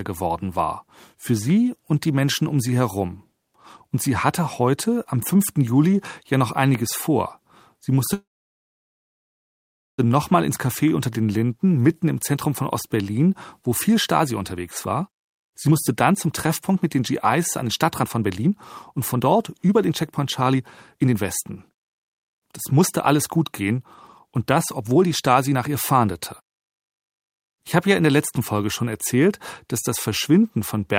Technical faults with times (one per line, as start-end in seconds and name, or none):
8.13-10.00 call audio freeze
14.18-18.52 jitter buffer speed-up
18.92-23.78 jitter buffer speed-up
24.27-25.75 jitter buffer speed-up